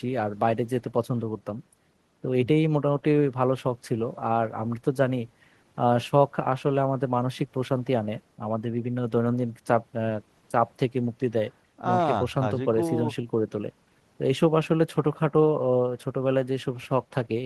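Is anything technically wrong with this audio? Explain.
No, there are no technical faults in this recording.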